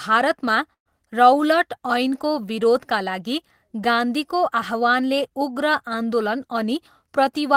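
Speech, with a burst of packet loss from 0.73 to 0.88 s. Several packets' worth of audio, about 120 ms, never arrived, and the receiver stretched the last sound to cover roughly 119 ms, fading it so the tail falls near silent for about 90 ms. The speech then picks up later, with that stretch missing. The smeared, fading fill and the skipped material distinguish it from a plain dropout or a single lost packet.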